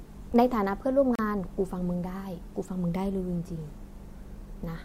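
Two stream segments have timestamps that don't quite meet, so the player pads the gap between segments with silence at 1.15 to 1.19 s. The speech stops dead for about 35 ms with hard edges on both sides, then resumes with nothing lost.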